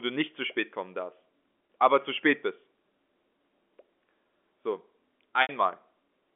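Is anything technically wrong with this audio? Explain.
Yes, there is packet loss with pitch repetition in two places in this telephone-band speech. At 1.67 to 1.69 s, 20 ms of audio goes missing, and at 5.42 to 5.49 s, 70 ms is lost, which fits 10 ms packets. The receiver covers each hole by looping the last pitch period and fading it out over about 50 ms. The short gap comes out as a brief held, buzzy tone. The longer one outlasts that fade, so it sinks to silence before the speech cross-fades back in.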